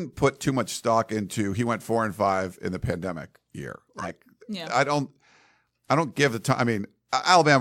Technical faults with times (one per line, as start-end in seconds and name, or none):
3.97-4.15 corrupt frame decoded